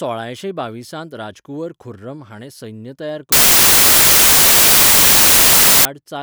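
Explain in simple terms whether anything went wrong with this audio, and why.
From 3.32 s to 5.85 s, the speech is buried under loud hiss. This is samples built from the wrong bytes. The player joins each sample's bytes together wrongly. The tiny, jittery details become the loudest part, so it sounds like white noise.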